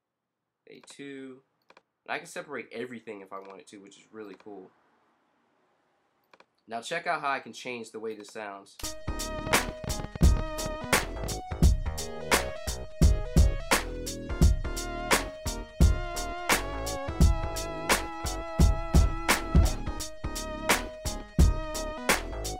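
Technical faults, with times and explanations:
9.39–11.33 s, train of clicks: around twenty unevenly spaced ticks at 10.4 per second, about 10 dB above the sound, likely from interference. They show as thin vertical spectrogram lines and sharp waveform spikes.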